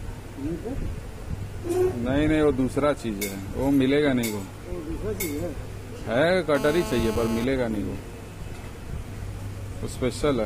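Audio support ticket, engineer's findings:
GSM phone buzz, 6.55 to 7.45 s. Hard, raspy buzz at 217 Hz with dense harmonics, about 8 dB below the signal, steady throughout, which fits a phone in a call. A nearby 2G handset's transmit bursts are being rectified in the audio input stage.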